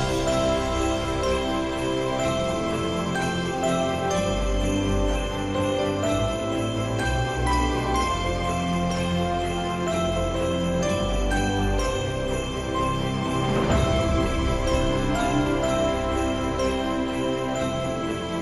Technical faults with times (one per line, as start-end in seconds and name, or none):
none